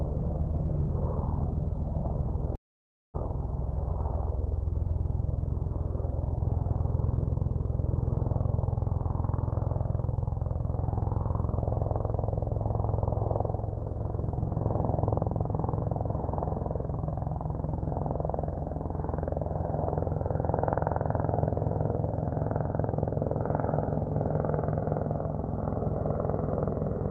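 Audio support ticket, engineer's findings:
Long network dropout, 2.55–3.30 s, likely packet loss: fading concealment buzz, then silence; spectrogram shows smeared tail into blank band, waveform flatlines before audio resumes.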